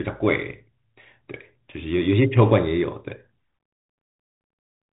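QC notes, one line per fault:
Throughout: Bluetooth CVSD headset codec. The speech is squeezed into a narrow telephone band with nothing above 3.8 kHz, and the coding damage is plainly audible, consistent with a 64 kbps one-bit delta stream. Because each sample only steps up or down, loud fast rises outrun the adapting step and smear, s sounds turn scratchy, and a granular hiss sits underneath. A spectrogram shows a hard ceiling at 3.8 kHz with empty space above and a grainy noise floor. The waveform shows slope-limited, stair-stepped attacks.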